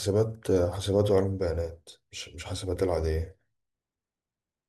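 At 1.92 s and again at 3.93 s, the speech has a brief click caused by overlapping chunks. The audio was handled in 2.0 s blocks, and each new block began slightly before the previous one finished, so about 6.5 ms of signal plays twice at each join. That duplicated sliver creates a small discontinuity in the waveform. It recurs at the 2 s block spacing and sounds like a regular tick or stutter.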